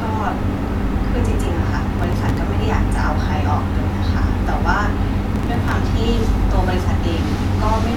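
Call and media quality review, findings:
Processor overload crackle, 1.99–2.37 s: gritty tearing over the speech. Sounds like the audio thread missing deadlines back to back, with each missed buffer just dropped, leaving lots of tiny hard-edged gaps. Fits very short buffers, around a millisecond and a half.

Same thing again, 5.32–5.72 s, a bit longer and denser. Likely a CPU load spike starving the audio callback; clears once the load drops.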